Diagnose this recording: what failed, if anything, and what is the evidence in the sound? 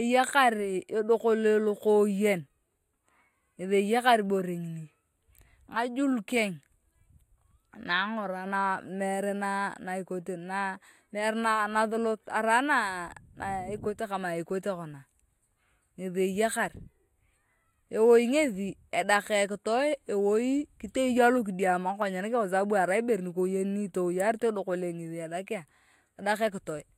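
The speech sounds hollow and phasey for the whole clip, with fixed notches starting near 5 kHz and repeating evenly above it. That is channel delay (comb filtering), arising where two channels are folded to mono. One channel arrives a few samples late, around a tenth of a millisecond. When the two are summed, material common to both cancels at evenly spaced frequencies. Because the offset never changes, the notches stay fixed throughout.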